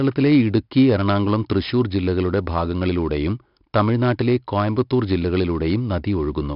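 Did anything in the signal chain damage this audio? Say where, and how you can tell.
Yes, at the codec stage: 4-bit ADPCM compression across the whole speech clip. There's gritty hiss riding on every loud stretch, harsh attacks where the step size can't adapt fast enough, and nothing above 5.3 kHz. The heavy damage fits a roughly 44 kbps stream.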